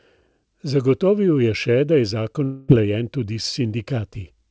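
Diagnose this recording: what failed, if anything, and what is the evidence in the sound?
From 2.44 s to 2.70 s the speech gives way to a fading buzz or hiss, with no true silence. About 240 ms never comes back. This is a long network dropout, likely at the network stage. Packets stopped arriving, and the receiver stretched the last sound until they resumed.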